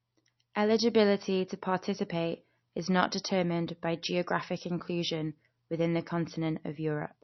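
A lossy encoder starved of bits, likely MP3 compression at a low rate consistent with about 32 kbps, runs from start to finish. It discards everything above 6 kHz and drops weak spectral detail frame by frame, leaving the speech dull, watery and swirly throughout.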